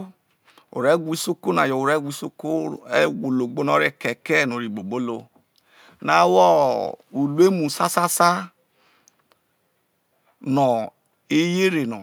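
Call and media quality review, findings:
Nothing to flag on this speech recording; it comes through steady and intact the whole way, so no findings to log here.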